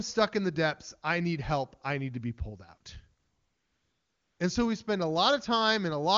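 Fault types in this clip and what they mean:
AMR comfort noise: After "to be pulled out", from 3.19 s to 4.39 s, the transmitting side treated the talker as silent and stopped sending speech frames for about 1.2 s. The receiver filled that gap with synthetic noise built from a coarse level and spectral estimate, so the genuine background is replaced by a smooth, uniform hiss that switches in and out at the gap boundaries. The surrounding wideband speech is clear, which fits a high AMR-WB rate.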